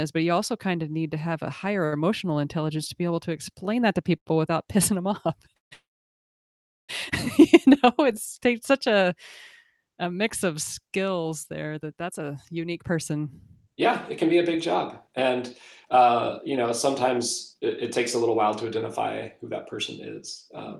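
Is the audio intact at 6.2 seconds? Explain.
No. A call audio freeze runs from 5.73 to 6.91 s, just after "pissing them off". Late packets likely emptied the jitter buffer. A brief fading buzz gives way to about 1.07 s of silence. The sound then resumes where it stopped, with nothing lost.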